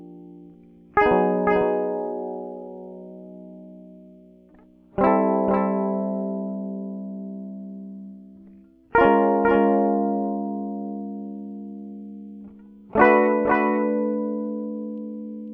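Music, and the whole thing carries a doubled audio track: a second full-band copy of the mix trails the original by about half a second, sitting roughly 5 dB down, from start to finish. It's not a reverb or slapback. There's no decay and no room colour, just the same material repeated flat and out of step. That's likely a second capture through a slower path, or an edit that left two copies misaligned.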